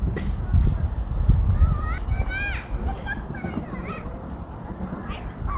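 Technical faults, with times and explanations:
2.12–5.56 s, jitter buffer speed-up: with more audio queued than its target, the receiver repeatedly cut pitch-period-sized slices, shedding about half a second, so the sound runs at 113% speed with pitch unchanged and feels hurried over the band-limited, below-4 kHz call audio.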